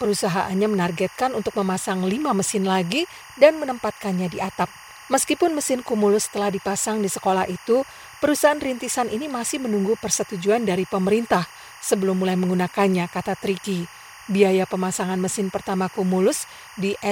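Right from the start and all the way through, there's timecode bleed sitting behind the speech: a chirpy warble flipping between two tones at roughly 1 kHz and 2 kHz. That's linear timecode from a neighbouring track or cable leaking in. The code's square wave toggles between those two pitches, and its frame rhythm fits 23.976 fps. It sits somewhere around 20 dB under the speech, so it reads as a constant chatter.

Running alongside that for the whole clip is sample clock jitter. The converter's clock is wobbling, so each sample gets grabbed a touch early or late, on the order of a microsecond or two. Because the error scales with how steeply the waveform is moving, you hear it as a fine hiss or grit that rides up on louder and brighter moments of speech and drops out in the gaps. It sits roughly 35 dB down.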